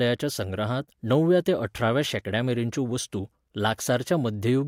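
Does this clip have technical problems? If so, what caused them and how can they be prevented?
No, there are no audible faults in this recording, so there is nothing to trace to a cause and nothing that needs preventing.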